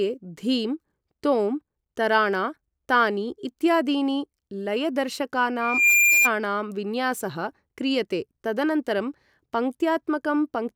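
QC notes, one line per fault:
5.61–6.31 s, loudspeaker feedback squeal: a 2.4 kHz tone swells over roughly a third of a second to about 5 dB above the speech as the mic-speaker loop exceeds unity gain, a bright horizontal line on the spectrogram.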